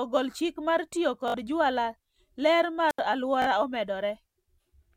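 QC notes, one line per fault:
1.28–1.34 s and 3.42–3.46 s, Bluetooth stutter: between "ogol chik mar tiyo" and "jwala ler" about 61 ms of audio goes missing, and at 3.42 s about 40 ms. Each time the receiver replays its last short slice, so the gap is filled with a rapid buzzy repeat rather than silence. That fits roughly three and then two lost packets. Unlike a squelch dropout, the gap is never empty; the repeating fragment is what gives it away.
2.89–2.99 s, wireless microphone squelch dropout: just after "jwala ler" the output is muted for about 76 ms. The radio signal fades far enough that the receiver's squelch shuts the audio off, leaving a clean hole of near silence before the sound returns. It differs from the Bluetooth stutter because nothing is repeated; there is simply a brief gap, with no buzz or machine-gun effect.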